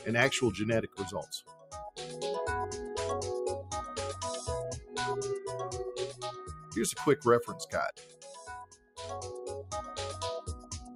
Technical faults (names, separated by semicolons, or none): noise suppressor applied to music or sounds; sound cut by the noise suppressor